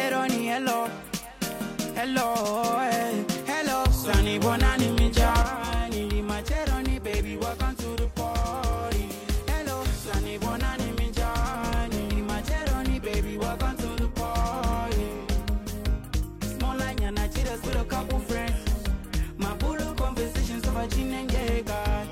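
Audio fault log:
5.42–22.11 s, one channel drops out: At 5.42 s the level falls abruptly by about 6 dB. It stays down to the end. The likely cause is one stereo channel going silent, so the mono sum carries only half the shared signal.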